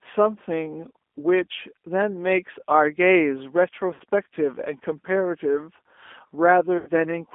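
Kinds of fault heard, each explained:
G.729 codec, throughout: The speech has the slightly rough, synthetic quality of a low-rate coder that rebuilds each 10 ms frame from a vocal tract filter, a pitch predictor and a handful of pulses, and the damage is plainly audible. Content sits in a narrow line band of roughly 250 Hz to 3.5 kHz, so low body and all upper brightness are missing. The coarseness fits an 8 kbit/s G.729A stream.
VoIP packet loss concealed by the speech codec, 3.94 to 4.03 s and 6.78 to 6.90 s: At both points the decoder ran out of incoming audio and kept extrapolating from its last pitch and filter settings, stretching the sound into a buzzy tone or a coloured noise that fades while lowering the gain frame by frame. The first gap covers about 60 ms and the second about 90 ms, consistent with two and then three lost packets. The sound stays weak and distorted briefly after each gap.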